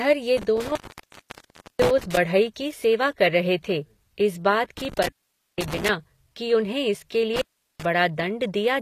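Right from the start the speech has a metallic top end, with nothing above about 14.9 kHz. That's most likely HE-AAC compression at a low rate, something around 24 kbps. The codec keeps only the lower spectrum and fakes the treble by copying lower bands upward under a rough envelope. The highs reach up further, but the harmonics don't line up across the join, so the s sounds come out gritty and lispy.

On top of that there's an intermittent contact, like a loose plug, in three places. From 0.37 to 2.17 s the line drops open for about 1.04 s, with crackle at each edge and faint hiss in the gap. It happens again from 4.77 to 5.89 s, open for about 0.49 s, just before "कि उन्हें इसके". The last one runs from 7.36 to 7.85 s, open for about 0.38 s, right after "कि उन्हें इसके".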